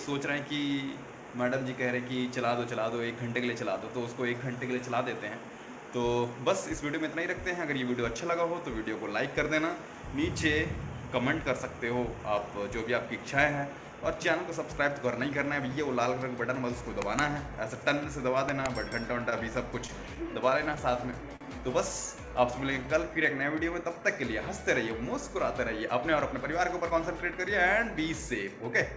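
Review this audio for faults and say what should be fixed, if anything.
Between 19.30 and 21.43 s there are scattered short gaps: about ten small packet holes, the longest around 40 ms. Each was patched by stretching the preceding sound, so you get brief ticks and smears.

From 22.07 to 23.23 s there's a jitter buffer slow-down. The receiver repeats pitch periods to add 60 ms, so the sound drags at 96% speed while the pitch stays the same.

From 25.21 to 27.56 s the opposite happens, a jitter buffer speed-up. Short pitch-period chunks, roughly 100 ms in total, are cut out, so the sound runs slightly faster at 104% speed. All of this sits on a call path with nothing above 8 kHz, which fits G.722 at 64 kbps.

To fix it, steady the network path so fewer packets arrive late or get lost, and give the jitter buffer a slightly larger, more stable target delay so it doesn't have to keep stretching and squeezing the audio.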